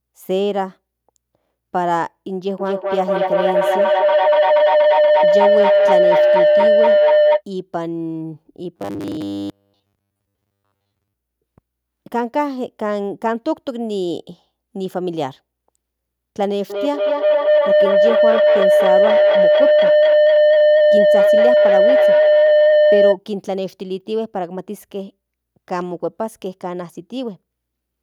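From 2.59 to 7.43 s a feedback howl builds over the speech. Two devices in one room are on the same call, and each pass from loudspeaker back into microphone adds level, so the sound narrows to a tone around 700 Hz that pulses roughly every fifth of a second and peaks about 7 dB above the speech. A spectrogram shows a bright horizontal line near 700 Hz thickening over time, and the waveform swells in regular pulses.

Between 8.77 and 11.14 s the speech turns into a rigid, metallic buzz at 100 Hz that still loosely tracks the talking. This is robotic sound from repeated short buffers, likely because new audio arrived too seldom and the last 10 ms or so was looped to fill the gaps, with most of the real audio skipped. On a spectrogram this appears as evenly spaced harmonics every 100 Hz, and the waveform shows a short, near-identical cycle repeating.

From 16.7 to 23.19 s the same feedback howl returns, again a tone around 700 Hz pulsing roughly every fifth of a second and peaking about 7 dB above the speech. 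It draws the same bright, growing line near 700 Hz on a spectrogram, and the waveform again swells in regular pulses.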